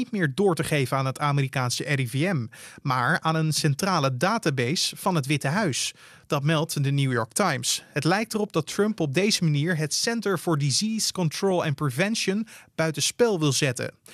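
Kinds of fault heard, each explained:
DAB burbling: weak reception lets bit errors slip past error correction into the MP2 data, so sub-bands jump in level for up to a frame. Here you get brief bursts of burbling after "centrale database van het" at 5.27 s, at 8.27 s before "erop dat", and at 11.41 s.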